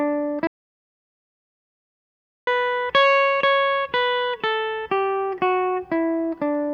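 The input feed to the recorder was most likely lost for a moment, whether through a disconnect or a stray mute, while silence kept being written. The result in this music clip is an audio dropout to silence from 0.47 to 2.47 s: two full seconds of dead silence with no room tone, and the music in that stretch is gone.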